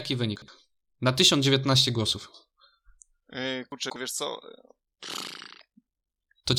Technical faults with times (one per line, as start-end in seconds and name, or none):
0.36-0.48 chunks out of order
3.72-3.96 chunks out of order
5.10-6.59 overlap-add ripple